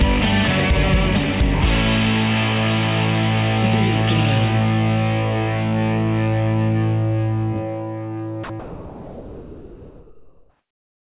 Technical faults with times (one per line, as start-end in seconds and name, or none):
8.44-11.18 sound dropped by the voice detector